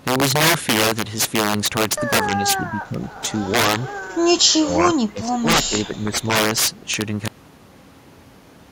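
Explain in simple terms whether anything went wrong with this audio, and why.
Sharp, violent cracks burst out of the loudest moments of the speech throughout the clip, much harsher than ordinary distortion. This is integer overflow. The signal was pushed well past the biggest number the system can store, and instead of being held at that ceiling, the peaks wrapped around to the opposite extreme. Only a small share of the sound crosses that line, but every time it does, it snaps across the whole range and cracks.

The speech also dips and fades in patches: briefly from 2.72 to 2.99 s, most heavily from 4.48 to 5.48 s, where parts almost disappear, and again from 5.66 to 6.3 s. This is speech suppressed in double talk, and the likely cause is an echo canceller. When both sides of a call talk at once, it can confuse this talker with the echo of the other person, so it turns this voice down along with the echo.

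At 7.28 s the audio stops dead in the middle of the speech and drops straight to total silence, with no natural fade. This is a cut-off end. The final stretches of audio were never written or played, so the recording simply ends at that point and stays silent for the rest of the clip.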